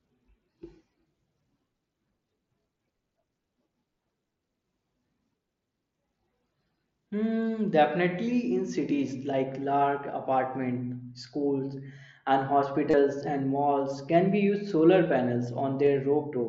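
At 12.90 to 12.94 s, just after "large apartment schools and" and before "and malls can be", the speech turns briefly into a held, buzzy tone at full level, then warbles slightly as real audio resumes. This is concealed Bluetooth headset packet loss. About 30 ms of the headset's mSBC stream went missing, which fits a run of roughly four packets, and the phone filled the gap by repeating the best-matching recent waveform. A single lost packet at 15.86 s is nearly hidden.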